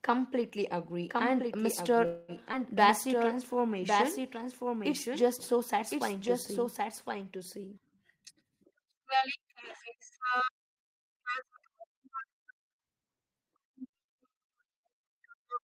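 From 1.10 to 7.77 s, the speech is heard twice in a doubled audio track, likely from a second, slower capture path. A full-band copy roughly 5 dB quieter trails about one second behind and starts and stops abruptly.

From 2.05 to 2.31 s, a call audio freeze occurs, likely because held-up packets left the jitter buffer empty. The last sound is stretched as a fading buzz or hiss for 229 ms, then speech resumes with nothing lost and sits 229 ms later.

At 2.52 to 2.56 s, a skip ahead drops roughly 70 ms of waiting audio. The two sides are joined almost directly, with only a 5 ms fill, so a fragment of sound simply vanishes.

From 3.08 to 4.22 s, a jitter buffer slow-down repeats pitch periods to rebuild its reserve, adding 55 ms. Speech plays at 96% speed at unchanged pitch, slightly drawn out.

From 8.31 to 11.77 s, a jitter buffer speed-up trims an overfull buffer, cutting around a fifth of a second in small pieces. 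Speech runs at 107% speed at the same pitch and sounds hurried.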